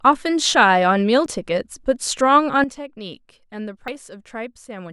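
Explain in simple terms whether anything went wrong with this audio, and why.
At 1.26 and 3.88 seconds the speech skips ahead, as if a tiny piece were snipped out, very brief at 1.26 and a bit longer, under a tenth of a second, at 3.88. That's a dropped buffer (overrun), likely from the recording program falling behind so the hardware overwrote audio before it was saved.

At 2.64 seconds the speech and the background hiss both drop noticeably quieter in one instant and stay that way to the end. That's a sudden gain jump, likely a volume setting applied all at once instead of being faded in smoothly.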